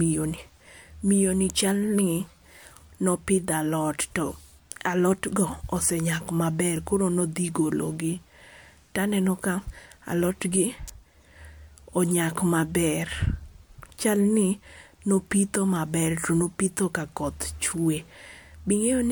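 At 1.50 s, just after "miyo ni", then at 10.88 and 15.32 s, sharp snaps sit on top of the speech, each under 20 ms and peaking around -15 dBFS. An electrical switching spike, likely a nearby switch arcing into the line, is unlike a dropout because the speech continues uninterrupted beneath.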